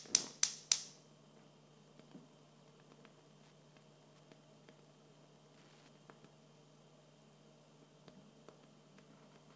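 From 0.39 s to 6.12 s there is Wi-Fi interference: the audio circuit rectifies a nearby radio's beacon, producing faint ticks every 102.4 ms, roughly 35 dB below the sound. Its ten-per-second ticking is far slower than the 217 Hz buzz of mobile-phone interference.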